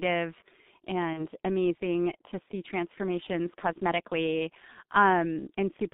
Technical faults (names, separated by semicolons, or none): G.723.1 codec; VoIP packet loss concealed by the speech codec